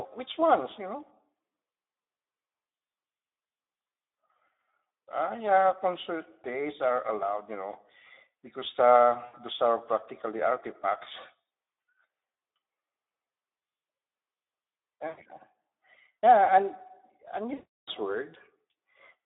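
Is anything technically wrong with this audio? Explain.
Yes. Throughout, the speech sounds hoarse, noisy and band-limited to roughly 250 Hz to 3.7 kHz: plainly audible Speex codec damage, consistent with a low setting near 11 kbps starving the excitation of bits.

At 9.25 to 9.36 s, 15.07 to 15.25 s and 17.53 to 17.90 s, the speech smears into a buzzy tone or coloured noise that fades, and stays weak or distorted afterwards. This is VoIP packet loss concealed by the speech codec: about 80, 100 and 340 ms of packets were lost, and the decoder extrapolated from its last pitch and filter while lowering the gain.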